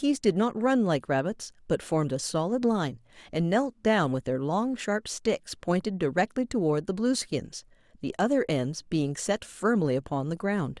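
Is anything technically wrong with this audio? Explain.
No, nothing technically wrong stood out on listening to this audio.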